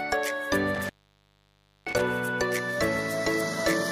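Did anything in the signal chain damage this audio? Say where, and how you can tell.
Yes, in the analogue wiring. Between 0.75 and 2.01 s the sound drops out for roughly 0.97 s, with crackle at the edges and only faint hiss while it is gone. That is an intermittent contact: a loose plug or cable conductor briefly opening and then scraping back into connection. A digital dropout or buffer underrun would leave clean, dead silence with hard edges. Here the scratchy transitions and residual hiss place the break in the physical connection.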